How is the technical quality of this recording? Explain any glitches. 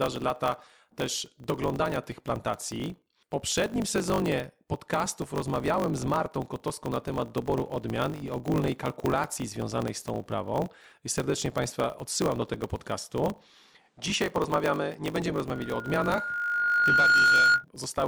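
The recording has three technical faults: one runs through the whole clip, and two are brief events near the end.

Block size mismatch (truncated), throughout: one processing stage writes longer blocks than the next reads, which fits 1024-sample writes, so each block's tail is discarded. The result is a steady 50 Hz buzz, and the speech runs 1.07 times fast at roughly normal pitch.

From 13.79 to 15.22 s, just after "odsyłam do tego podcastu", the recording likely switched its input to a poorer device. The narrower band makes the speech duller, with a new noise floor about 45 dB down. There is no gap at the switch and no change in level.

Loudspeaker feedback squeal, 15.52 to 17.65 s: the microphone picks up its own loudspeaker, and at 1.4 kHz the loop gain exceeds one. That tone swells over about one and a half seconds into a squeal roughly 10 dB above the speech.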